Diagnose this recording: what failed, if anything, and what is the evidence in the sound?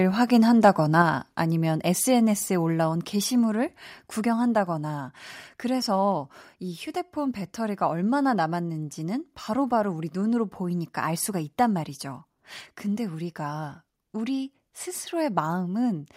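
At the converter, microphone overload is heard at 0.66 to 0.68 s. The peak crackles harshly, about 1 dB over full scale. This is likely from excessive input gain.

In call processing, the microphone volume stepped down at 1.02, 2.04 and 3.06 s. Voice and background drop by about 4, 1 and 2 dB. This is likely automatic gain control reacting to a microphone it found too loud.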